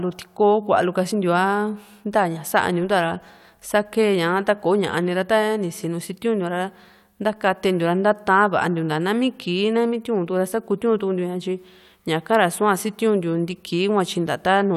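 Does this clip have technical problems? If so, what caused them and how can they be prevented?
No, there's nothing technically wrong to flag here, so there's no cause to track down and nothing that needs preventing.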